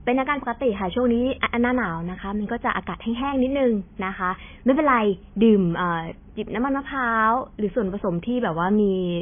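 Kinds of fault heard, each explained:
MP3 compression: The audio was likely squeezed through an MP3 encoder starved of bits. Nothing is heard above 3.5 kHz, because the encoder cut the treble there. The speech sounds dull and muffled throughout. The damage is heavy. Weak frequency components switch on and off between frames, which gives a watery, swirling texture. S sounds come out thin and metallic, and consonant attacks smear. The sound points to a bitrate near 19 kbps.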